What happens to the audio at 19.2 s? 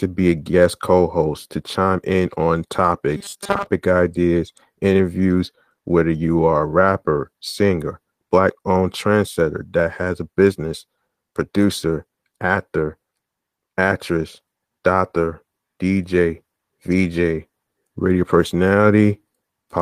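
Nothing goes wrong at 19.2 s; the speech carries on intact through that moment with no audible fault.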